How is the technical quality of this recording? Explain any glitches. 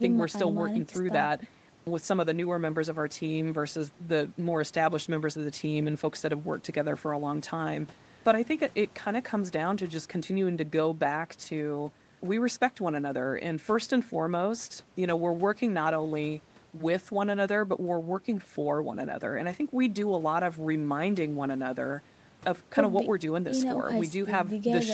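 No glitches: the speech tops out at 8 kHz, which fits normal call microphone processing and a WebRTC call path with an Opus codec at roughly 32 kbps.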